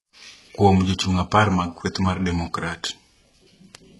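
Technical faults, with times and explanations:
Throughout, HE-AAC compression: the speech has gritty, lispy s sounds and a synthetic-sounding top ending at 11.5 kHz, likely heavy band replication from a very low bitrate, around 12 kbps.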